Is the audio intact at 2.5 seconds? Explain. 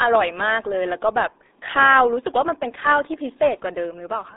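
No. At 2.5 seconds, as throughout the clip, the speech has passed through the RealAudio 14.4 codec, a low-rate dial-up speech coder whose sound fits about 8 kbit/s. It keeps only a 300 Hz to 3.7 kHz band, with nothing above 3.8 kHz, and its heavy coding damage leaves the speech muffled and gargly.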